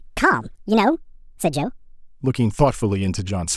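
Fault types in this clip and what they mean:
Section at the wrong speed: from 0.0 to 2.0 s the speech runs 1.56 times too fast, pitch raised about seven semitones, likely from playback against a mismatched clock. A spectrogram shows harmonics and formants stretched upward and compressed in time, snapping back down at 2.0 s.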